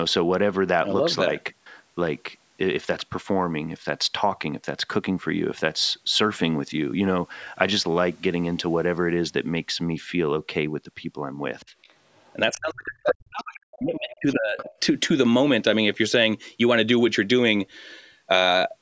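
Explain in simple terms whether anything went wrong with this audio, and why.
Yes, two things went wrong. Faint scraps of another voice appear at 11.6 to 11.66, 11.82 to 11.94 and 12.13 to 12.33 seconds, then louder at 13.93 to 14.16 and 14.58 to 14.76 seconds. This is the other side's voice leaking through, likely because the echo canceller missed part of the loudspeaker sound. From 12.56 to 14.58 seconds the main voice sinks almost to silence. This is speech suppressed in double talk, likely with both sides talking at once and this side's voice being turned down along with the echo.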